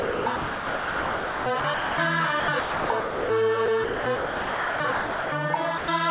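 Sound chopped by the voice detector runs from 0.00 to 1.98 s, again from 2.40 to 3.30 s, and from 3.66 to 5.32 s. The likely cause is the sender's voice activity detection repeatedly switching transmission on and off, so quiet passages and edges were swapped for comfort noise: about 1.64 s of the first stretch, 0.68 s of the second and 1.28 s of the third. The result is choppy, with holes in the sound.

Sound dropped by the voice detector follows at 5.78 to 5.88 s. Here the detector likely mistook a soft portion for background and stopped sending, so 100 ms of the sound is missing and steady comfort noise fills the gap before the signal returns. Throughout, nothing is heard above 4 kHz, which fits a narrowband G.711 A-law call path at 64 kbps.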